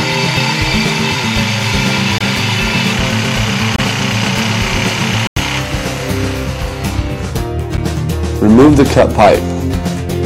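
A block of digital silence, where the buffer went unfilled, cuts the sound at 2.18 to 2.21 s, 3.76 to 3.79 s, 5.27 to 5.36 s and 7.77 s. The edges are abrupt, unlike a faded dropout. The 23 ms holes fit a 1024-sample buffer, and the 93 ms hole fits four.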